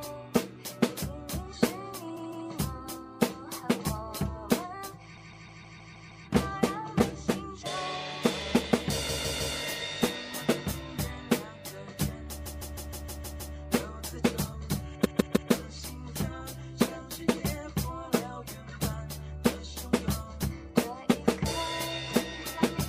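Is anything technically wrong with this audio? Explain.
Yes, there are repeated frames. The same 157 ms chunk loops at 2.16–2.47 s, 5.16–6.26 s, 9.08–9.55 s, 12.45–13.55 s and 15.04–15.51 s, playing 2, 7, 3, 7 and 3 extra times. That causes a stutter, and adds 0.31 to 1.1 s each time, 3.4 s in all.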